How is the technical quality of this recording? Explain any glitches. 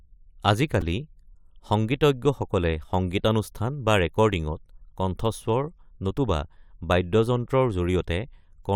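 There is one glitch: a repeated buffer at 0.81 s. Audio arrived late, so a 2.67 ms chunk, which fits a 128-sample buffer, replayed four extra times. That makes a brief buzzy click with no audio lost. On a waveform it appears as identical repeating cycles. On a spectrogram it shows as a thin vertical streak with harmonics spaced near 375 Hz.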